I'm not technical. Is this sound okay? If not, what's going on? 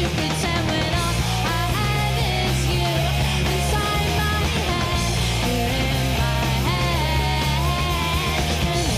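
Yes, no audible faults here.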